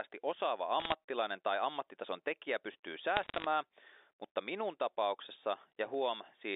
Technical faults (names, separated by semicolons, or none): bit errors on a digital phone line